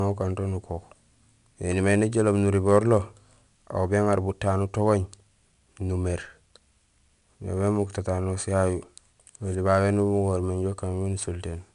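Speech throughout carries a gritty hiss that follows its loudness, with nothing above 10.7 kHz. This is 4-bit ADPCM compression, whose coarse predicted steps fit roughly 88 kbps.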